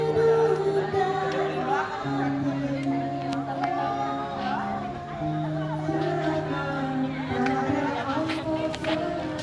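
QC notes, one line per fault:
No technical faults are audible; the signal holds steady in level, timing and continuity for its whole length.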